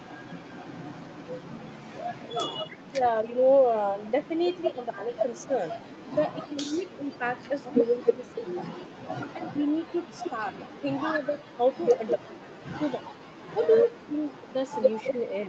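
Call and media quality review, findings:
Speech suppressed in double talk: talker's level drops in pieces at 2.3–3.42 s (deepest about 30 dB), 4.74–5.53 s (about 15 dB), and 6.49–15.2 s (about 25 dB). Likely the echo canceller ducking the near talker while the far side speaks. The dips follow the overlapping speech, not steady packet gaps.

Echo leak: delayed copy of the voice at 7.4–10.77 s (280 ms behind, about 20 dB down) and 11.97–15.48 s (212 ms, about 10 dB down). Likely an incomplete loudspeaker echo cancellation. The fixed lag distinguishes it from room reverb.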